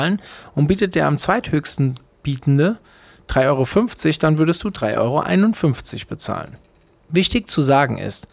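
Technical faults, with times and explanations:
No technical faults are audible in this speech recording.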